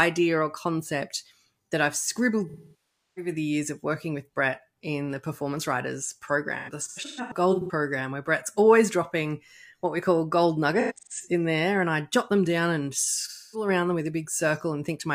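AAC frame loss with concealment at 2.49–3.31, 6.58–7.71, 10.81–11.26 and 13.21–13.68 s: the decoder rebuilds missing frames from the last good spectrum, so the speech turns smeared and phasey.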